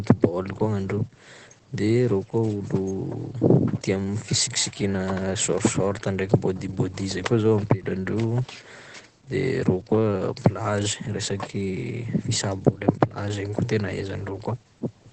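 From start to finish the speech sounds muffled and hoarse, and nothing is heard above about 8.5 kHz, so the air and crispness of consonants are gone. This is likely Opus compression at a very low rate: the narrowed wideband spectrum and hoarse texture point to the encoder's speech (SILK) mode, which fits a bitrate around 12 kbps. At that rate it models the sound coarsely, and the damage is heavy throughout.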